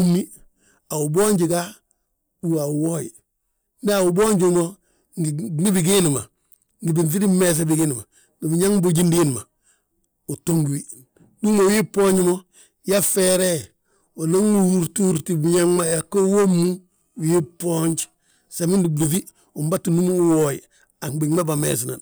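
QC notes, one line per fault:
13.20–18.56 s, time-stretched section: the speech abruptly slows to about 0.7 times its surrounding pace while its pitch stays unchanged, then returns to normal speed at 18.56 s. Through this stretch it drags, with syllables drawn out. This is likely software lengthening the passage to fit a target duration, preserving pitch by repeating short overlapping slices of the waveform.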